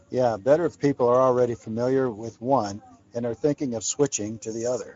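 From start to finish the speech carries plainly audible Speex codec damage. Speex is a CELP coder, so it rebuilds the voice from a vocal-tract model plus a coded excitation signal. The roughness and artificial edge here suggest that excitation didn't get enough bits, which fits a wideband mode running at around 16.8 kbps. Nothing comes through above 7.7 kHz, so the top end sounds cut off rather than airy.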